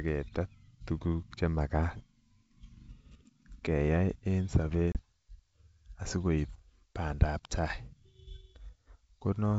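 At 4.92–4.97 s, after "keyai en", packet loss on the ADPCM call leaves a hard-edged 30 ms gap, and speech returns briefly distorted while the decoder's predictor resynchronises.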